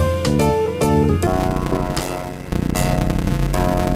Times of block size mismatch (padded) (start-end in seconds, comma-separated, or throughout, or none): 1.27-3.96